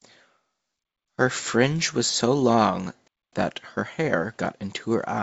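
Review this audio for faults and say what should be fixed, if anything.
The speech breaks off twice with a gap between chunks: 0.83 to 1.08 s, and 3.08 to 3.33 s, between "fringe was so long" and "that her hair got". Each hole is 0.25 s of silence and they are about 2 s apart, so each chunk seems to start late rather than losing audio. On a waveform these show as flat silent sections with abrupt edges; a spectrogram shows blank vertical bands. To fix it, play or join chunks back to back with a buffer, and trim any codec padding at each join.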